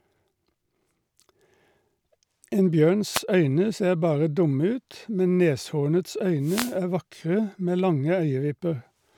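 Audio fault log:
3.12–3.21 s and 6.40–6.77 s, wireless microphone noise hit: the radio link from the analogue FM microphone fades as reflected signals cancel at the receiver, so receiver noise rises over the weakened carrier. The first is a brief swish just before "øyne ser bare dumme". The second, longer at about 0.37 s, falls between "dumme ut men neshornets" and "er vakre med lange" as a burst of static.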